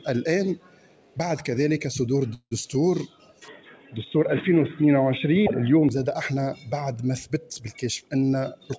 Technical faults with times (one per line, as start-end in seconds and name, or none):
2.34-2.53 call audio freeze
3.48-5.89 input switched to a poorer device
8.01-8.73 jitter buffer speed-up